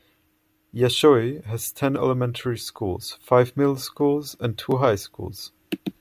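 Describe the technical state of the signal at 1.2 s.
At 1.2 s the speech signal is intact, with no dropout, clipping, glitch or other fault.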